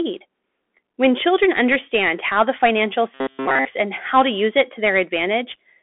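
From the start the speech carries Bluetooth CVSD headset codec damage: the spectrogram is empty above 3.8 kHz, a granular hiss fills the floor, and s sounds turn scratchy.

Between 3.14 and 3.65 s, after "understand how the financial" and before "and how to use", robotic sound from repeated short buffers takes over. The speech becomes a rigid metallic buzz at 134 Hz, likely from repeating chunks of about 7.5 ms. The waveform shows identical cycles, and the spectrogram shows evenly spaced harmonic lines.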